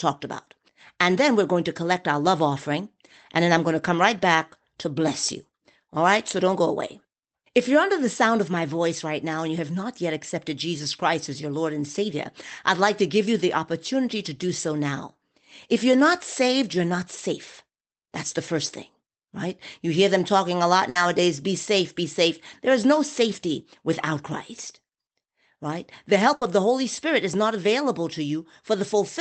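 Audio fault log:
20.89 s and 26.35 s, burst of packet loss: each time a stretch of the speech drops out, the last sound is held and fades out for about 60 ms, then the talk skips ahead.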